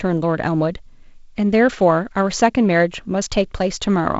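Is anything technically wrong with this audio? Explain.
No, nothing is technically wrong: this is speech carried over G.722 wideband telephone coding, with the band ending at about 7.7 kHz and a texture that fits the 48 kbit/s mode, all normal for that link.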